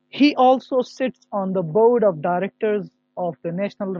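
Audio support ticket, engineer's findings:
Adaptive stream at a lower bitrate, 1.21 s to end of clip. Abrupt step down in quality with no gap: treble cut, nothing above about 7.1 kHz, speech turns dull with added codec artefacts. Player likely switched to a lower-bitrate rendition after the connection slowed, consistent with MP3 dropping from 128 to 32 kbit/s. Check the ABR logic and network throughput around the switch point.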